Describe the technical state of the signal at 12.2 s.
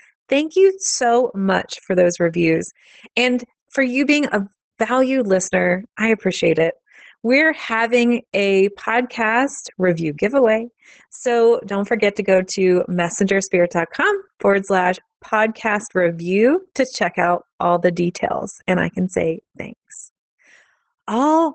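At 12.2 s the speech is still under Opus voice compression, which runs through the whole clip. The SILK coder is working at a rate that fits about 12 kbps, cutting everything above 8.5 kHz and coding the excitation coarsely, so the voice sounds muffled, hoarse and slightly robotic.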